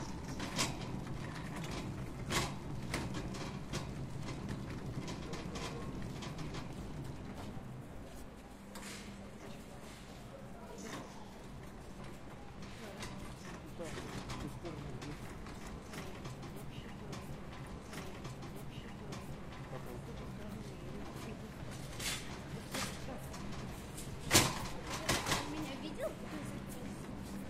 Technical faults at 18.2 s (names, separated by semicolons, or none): stream segment repeated